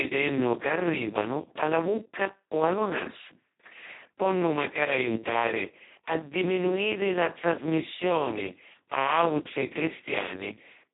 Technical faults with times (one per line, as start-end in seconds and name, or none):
0.00-10.94 Speex codec